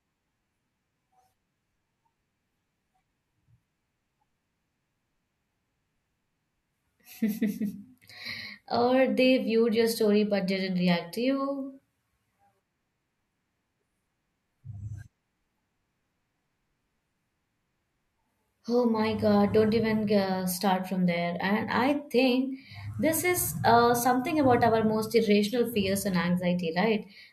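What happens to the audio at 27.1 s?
At 27.1 s the speech carries on intact, with no dropout, click, distortion or other break in the sound.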